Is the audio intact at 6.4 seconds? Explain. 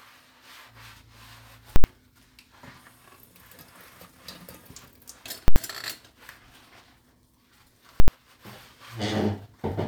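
Yes, the audio is intact at 6.4 seconds, with no dropout, glitch or other fault at that point.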